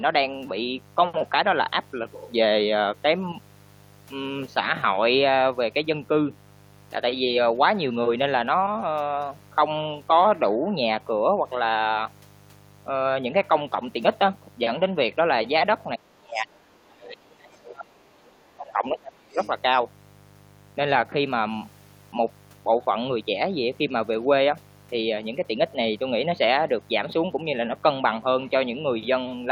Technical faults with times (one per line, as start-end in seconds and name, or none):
0.00-29.52 mains buzz
15.95-19.39 speech suppressed in double talk
19.33-19.50 other side's voice leaking through